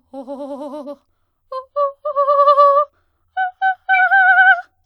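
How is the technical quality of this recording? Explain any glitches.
Three short glitches mar the music. Corrupt frame decoded at 0.83–0.88 s, 2.31–2.36 s and 3.94–4.01 s: damaged compressed frames were still played, misplacing energy. The first is a faint glitch; the later two are loud ones, seen as brief spectrogram smears and waveform spikes.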